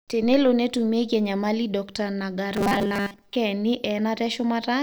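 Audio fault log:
2.54 to 3.36 s, robotic sound from repeated short buffers: the speech collapses into a rigid, metallic buzz pitched at 200 Hz, still loosely tracking the syllables. The likely cause is audio arriving too slowly, so playback keeps looping the most recent fragment, around 5 ms long to match that fixed pitch, while most of the real signal in this stretch is skipped over and replaced by repeats.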